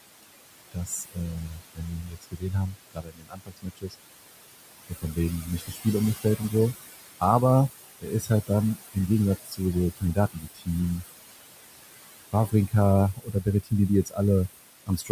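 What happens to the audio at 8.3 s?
Speech cut by the noise suppressor occurs between 8.0 and 10.68 s. It mistakes parts of speech for noise and pulls them down by up to about 21 dB, so sounds turn faint or swallowed. Noise suppressor artifacts are also present. The suppressor lowers the background by about 19 dB frame by frame, so the noise sinks between the words and rises under them.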